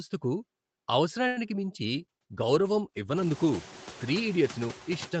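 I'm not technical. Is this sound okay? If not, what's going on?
No, there are a few problems. Throughout, a noise suppressor is at work, and its artifacts show: the background sinks between words and rises under them.

At 1.27 to 1.39 s there's a short stall from a late packet. The call briefly held the last sound for about a tenth of a second while waiting, so you'll hear a stretched moment.

Right after, at 1.47 to 1.50 s and again at 1.56 to 1.66 s, two short concealed packet losses occur. Tiny bits of audio went missing and were patched over, leaving brief smears or wobbles.

From 1.94 s to 4.87 s there's a call bitrate drop. The connection weakened, so the audio was squeezed harder and sounds rougher and more watery until it recovers. The room noise also rises around 3 s.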